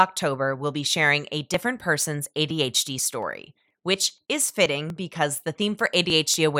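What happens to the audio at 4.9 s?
At 4.9 s the clip is inside a run of periodic USB or driver dropouts that starts at 1.54 s, just after "we'll be sharing a", and continues to 6.34 s. A background task stalls the USB bus or audio driver every 0.24 s, and each time roughly 10 ms of speech is skipped outright, not replaced with silence. Around twenty such gaps sound as a steady train of ticks or pops, heard only while speech is present.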